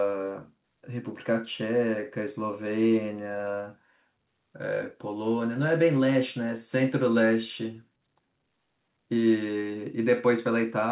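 Nothing's wrong with this speech clip; it came over a call link, and the way everything stops at 4 kHz is just what a G.711-style telephone codec does.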